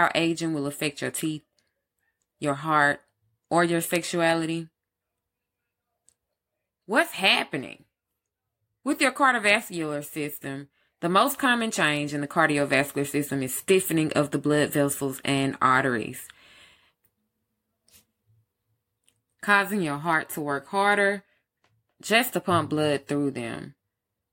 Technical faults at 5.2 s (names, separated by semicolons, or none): none